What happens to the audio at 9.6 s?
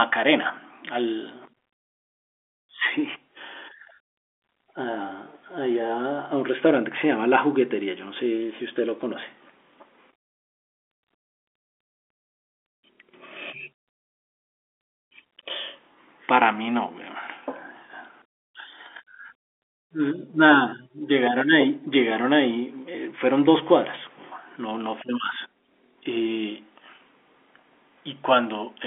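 Nothing goes wrong at 9.6 s: the speech runs on intact through that moment, heard through the narrow band of G.711 telephone coding, with nothing above 3.7 kHz.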